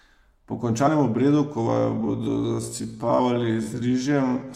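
At 1.65 s the speech abruptly slows and stays slowed through to the end, running at about 0.59 times its earlier pace while the pitch holds steady. This is a time-stretched section, likely the result of software lengthening the audio to fill a set duration by repeating short slices of the waveform rather than resampling it. The drawn-out speech drags.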